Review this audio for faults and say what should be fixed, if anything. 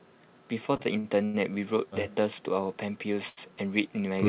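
Between 0.76 and 1.36 s the speech drags and stutters, with sounds held and repeated in four separate hitches. This is repeated stalls (stutter). Packets arrived late or more slowly than they were played, so the jitter buffer kept running empty. Each time, the receiver extended the last sound, about 196 ms in all and up to 95 ms at once, roughly a third of that stretch. Nothing is lost, but the flow breaks up. Giving the jitter buffer more headroom, or steadying the network link feeding it, would prevent this.

At 3.29 to 3.51 s one sound is held too long, with a slight buzz or dip where it is stretched. This is a short stall from a late packet. A packet missed its playout time after an 81 ms jump in delay, so the buffer emptied. The receiver spun out the previous sound for about 81 ms, then resumed at the same point, leaving the audio about 10 ms behind. Nothing is missing. This is heard through the narrowband G.711 path, which stops at 4 kHz. 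A steadier network route, or a buffer that adapts more quickly to sudden delay changes, would avoid it.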